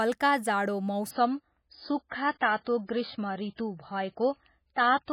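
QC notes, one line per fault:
1.11 s to the end, adaptive stream at a lower bitrate: the stream switched without a gap to a much leaner encoding, which fits a drop from a 128 kbit/s MP3 to a 16 kbit/s one after the connection slowed. With so few bits, the encoder discards everything above 5 kHz, so the speech turns abruptly dull and muffled. Sibilants lose their edge, and the remaining band carries swirly, watery codec artefacts from coarse quantisation.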